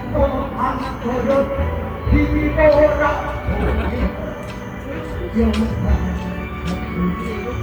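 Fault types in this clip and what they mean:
Bluetooth LC3 compression: The sound carries plainly audible codec damage throughout, a grainy, breathy texture where upper-spectrum detail has been discarded and replaced with synthesized noise, with no content above 20.3 kHz. This is likely Bluetooth LE Audio's LC3 transform codec, and the degree of damage fits a bitrate of around 48 kbps with 10 ms frames, where the encoder cannot afford to code the high bands accurately.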